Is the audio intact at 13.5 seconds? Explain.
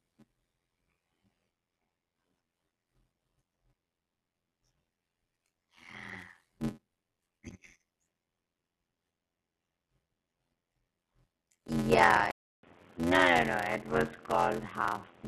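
No. Two faults overlap at 13.5 seconds.

A block size mismatch (padded) runs through the whole clip. Each block carries less audio than the next stage reads, which fits a 512-sample read buffer, and the remainder is filled with zeros. Those regular gaps produce a buzz at 86.1 Hz, and the speech plays at 0.625 times normal speed while keeping roughly its normal pitch.

From 12.31 seconds to the end of the clip, the sound changes character in a way consistent with an input switched to a poorer device. The likely cause is that the recording moved to a different microphone or to a headset's call profile. A 200 ms silence marks the switch, and after it the band is narrower, so the speech sounds dull and boxy. A new background noise sits roughly 30 dB below the signal, and the overall level stays about the same.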